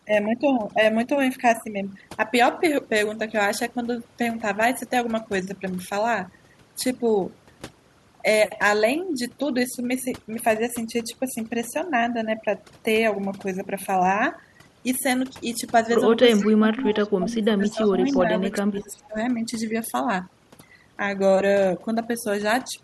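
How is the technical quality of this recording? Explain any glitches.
The recording has three audible problems: heavy processing throughout and a cluster of dropouts and echoes between 16.35 and 19.16 seconds.

Overdone noise removal runs for the whole clip. An aggressive noise reduction stage strips the bands it judges to be noise, which leaves near-silent backgrounds with twinkling specks.

Speech suppressed in double talk occurs from 16.35 to 18.22 s, dropping by about 20 dB at its deepest, and from 18.4 to 19.16 s, dropping by about 15 dB. The speech dips and breaks up, likely because an echo canceller ducked it while the far side was also talking.

Echo leak appears as short copies of the voice played on the loudspeaker, delayed by 350 ms, about 20 to 30 dB below the direct signal. They occur at 16.44–16.48, 16.95–17.08, 17.65–17.88, 18.08–18.19, 18.52–18.57 and 18.79–18.83 s. The likely cause is loudspeaker pickup that the echo canceller failed to remove.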